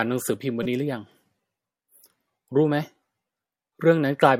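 At 0.63 to 0.66 s, a corrupt frame decoded: one damaged frame plays with wrong gains or misread codes as a glitch of misplaced energy near -15 dBFS, a brief misplaced vertical smear on the spectrogram.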